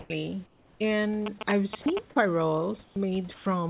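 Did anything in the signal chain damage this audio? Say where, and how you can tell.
Yes. Sound dropped by the voice detector is heard three times: at 0.0 to 0.1 s, at 1.82 to 1.86 s, and at 3.34 to 3.46 s. Each time the speech cuts out and a flat, steady noise fills the gap for 100, 40 and 120 ms respectively, losing up to 100 ms of real sound. This sits in call processing. The sender's voice activity detector most likely misread quiet speech as background and stopped transmitting, so the receiver substituted comfort noise until the detector fired again.

Comfort noise in place of the background also comes from call processing, at 0.46 to 0.8 s and at 2.84 to 2.96 s. Here the room background, normally about 30 dB below the loud speech, turns smooth and featureless and drops by about 4 to 5 dB for 340 and 120 ms. This fits discontinuous transmission, likely triggered when the detector judged the pause as non-speech. 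The receiver then generated synthetic noise roughly matched to the background's spectrum.

GSM signalling bursts run from 1.26 to 1.99 s, an analogue-wiring problem rather than a digital one. A galloping dit-dit-dit of short buzzes repeats at 217 Hz, sitting only a little below the speech. A nearby 2G phone sending intermittent signalling bursts was rectified by the microphone or preamp circuitry, demodulating the radio frame rate into audio. The interference passed through the narrowband call codec along with everything else, which removes all content above 4 kHz.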